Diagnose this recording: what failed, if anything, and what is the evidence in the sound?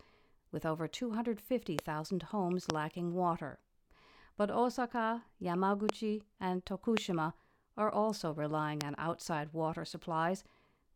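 Five loud pops sit on top of the speech, at 1.79, 2.70, 5.89, 6.97 and 8.81 s. Each is a single sharp click lasting about 20 ms and peaking roughly 25 dB above the surrounding level, while the speech carries on unbroken beneath it. That points to the analogue wiring stage, with the likely cause a recurring voltage step from an intermittent connector, switch contact or static discharge being added to the signal and shaped by the circuitry that follows.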